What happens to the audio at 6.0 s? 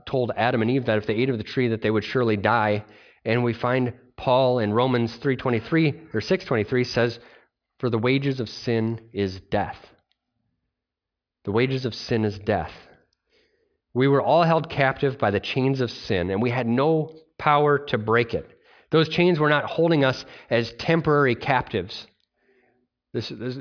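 Nothing goes wrong at 6.0 s; the speech carries on intact through that moment, with no dropout, click, distortion or other fault to be heard.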